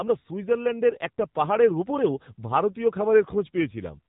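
From start to finish the speech sounds buzzy, thin and synthetic, with nothing above 4 kHz. That is the AMR narrowband mobile codec (AMR-NB) at a low mode that fits roughly 8 kbps, rebuilding the voice from a vocal-tract model and sparse pulses at 8 kHz sampling.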